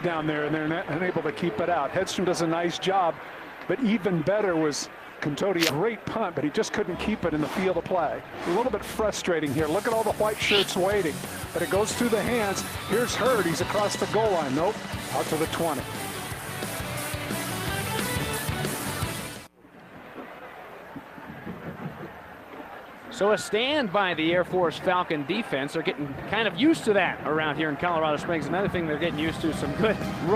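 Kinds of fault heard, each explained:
skip ahead: At 5.69 s the sound jumps forward abruptly with no gap, roughly a second of audio simply missing and the two sides butted together. Audio already queued behind a lost or discarded stretch was played straight on, cutting the delay by about that second.
jitter buffer speed-up: From 5.81 to 10.23 s the sound runs about 8% fast at unchanged pitch, hurried, then again briefly around 13.8 to 14.3 s at about 6%. The receiver was trimming short pitch-period slices repeatedly to drain an overfull buffer.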